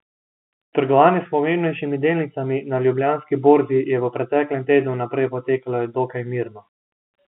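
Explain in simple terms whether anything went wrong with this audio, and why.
Nothing went wrong here: the speech simply has the narrow, boxy sound of ordinary G.711 telephone coding, which trims away the higher frequencies just as any landline call does.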